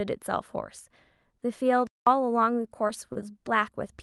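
At 1.87 s the speech cuts out completely until 2.07 s, a dead gap of about 195 ms. That's a playback stall: the output just goes quiet mid-flow and picks up again. The likely cause is the player running dry of data or its thread getting blocked.

Around 2.87 to 2.91 s there's a quick smear, from short concealed packet loss. About 20 ms of audio never made it to the decoder in time. The receiver papered over it by carrying the last sound forward for roughly 16 ms, then blended back in.

From 3.13 to 3.24 s there's a short stall from a late packet. The delay jumped by about 24 ms, so the jitter buffer ran empty and the receiver held the last sound for about 24 ms until the packet arrived. Nothing goes missing, but that bit sounds drawn out.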